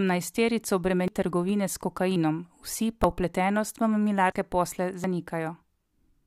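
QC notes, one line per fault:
1.08 s, 2.16 s, 3.04 s, 4.32 s and 5.04 s: dropped buffer (overrun). At each of these points the speech jumps forward with no gap. Roughly a tenth of a second goes missing at 1.08 s and 4.32 s, and a few hundredths at the other three. The likely cause is that the recording software fell behind, so the hardware overwrote samples before they were collected. The sound on either side of each lost piece is joined directly.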